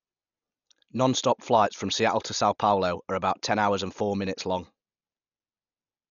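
From start to finish the speech sounds dull and boxed-in, and a rough, fluttering grain clings to the voiced tones instead of a clean edge. This is heavy coding damage, likely from Dolby Digital compression at a starved bitrate, on the order of 48 kbps. Short of bits, the encoder cut the band off and left many frequency lines without detail, so the decoder filled those gaps with noise.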